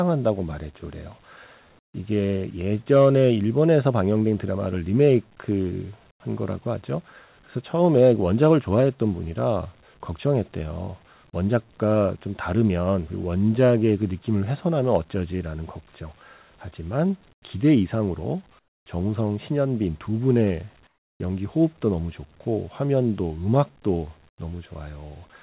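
Comfort noise in place of the background shows up in the speech pauses at 1.79, 6.11, 17.33, 18.59, 20.87 and 24.29 s, each lasting 90 to 330 ms. The real room tone drops by about 14 to 18 dB into flat, featureless hiss, likely from discontinuous transmission muting the sender, all over a call-band sound with nothing above 4 kHz, which fits G.711 at 64 kbps.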